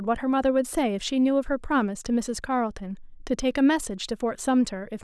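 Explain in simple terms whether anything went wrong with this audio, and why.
Nothing went wrong with this speech recording that a careful listener could point to. It holds together as one steady recording all the way through.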